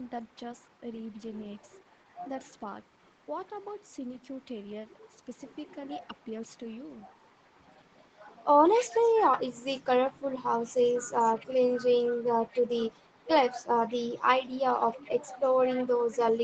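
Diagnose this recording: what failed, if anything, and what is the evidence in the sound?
The fault sits in the call processing. From 8.72 to 10.18 s there's a faint second copy of the speech trailing the original by about 194 ms, sitting well below the main signal. That's an echo leak, most likely from the far end running on a loudspeaker with an echo canceller that didn't fully subtract what its mic picked up, so the residue got sent back. The band-limiting, with nothing above 8 kHz, fits the Opus call path.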